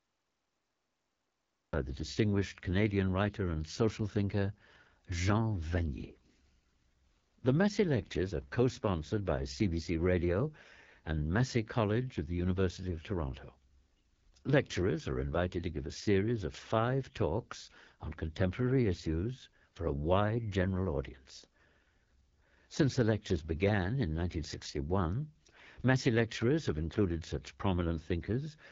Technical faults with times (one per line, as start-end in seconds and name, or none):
0.00-28.72 AMR wideband (HD Voice) codec
0.00-1.73 cut-off start